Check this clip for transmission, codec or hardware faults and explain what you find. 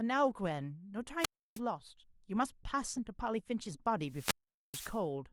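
Two wireless microphone squelch dropouts, at 1.19–1.60 s and 4.05–5.03 s: the radio signal fades, hiss rises, then squelch mutes the speech for about 0.31 s and 0.43 s respectively.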